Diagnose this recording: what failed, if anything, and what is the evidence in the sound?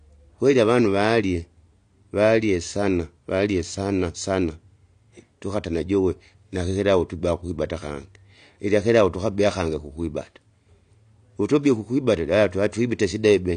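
The speech sounds dull and smeared from start to finish, with nothing at all above 9.8 kHz, and sibilants and held vowels carry a warbling, fizzy texture. The failure is at the codec stage: likely AAC compression, with the damage fitting AAC-LC at around 32 kbps. At that rate the encoder lowers its bandwidth and spends too few bits on each frame's frequency lines, so bands quantise coarsely or drop out, which leaves the holes and swirling artefacts heard here.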